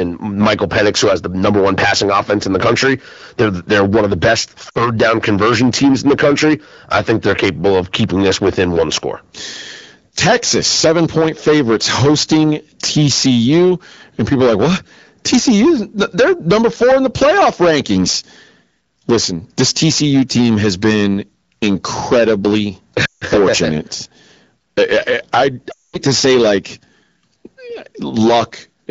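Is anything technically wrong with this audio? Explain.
Yes. Two faults are present in this speech.

Hard clipping runs through the whole clip. The signal is driven about 19 dB past what a stage can pass, so roughly a tenth of samples are cut flat. The squared peaks add high harmonics, heard as harsh fuzz on loud syllables.

Lost AMR speech frames occur three times. At 4.69 to 4.90 s, after "one of the best" and before "down conversion teams in", about 60 ms is lost. At 23.05 to 23.24 s, after "team has been incredibly", about 160 ms goes. At 25.72 to 25.96 s, between "I I" and "to say like", about 220 ms goes. The decoder repeats the last good settings at falling gain. Each gap drops to near silence within two frames, and the speech comes back weak.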